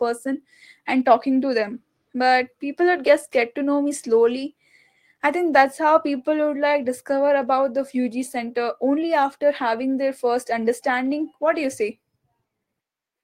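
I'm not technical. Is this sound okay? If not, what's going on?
Yes, no faults heard.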